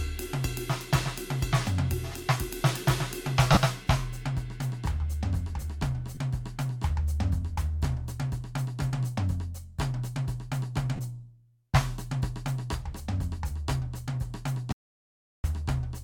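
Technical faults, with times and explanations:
3.53–3.57 s, 6.15–6.17 s and 10.96–11.00 s, lost LE Audio frames: gaps of 40, 20 and 30 ms, consistent with runs of 10 ms frames. The decoder repeats the last spectrum with scrambled phase, so the music's tones briefly become a noisy smear. On a spectrogram, the harmonic lines blur into diffuse patches at those instants.
14.72–15.44 s, audio dropout to silence: the music cuts off abruptly for about 0.72 s. The gap is silent with no background noise, and the music then resumes mid-flow. The likely cause is a lost input link while recording continued. The waveform shows a flat line, and the spectrogram a dark band.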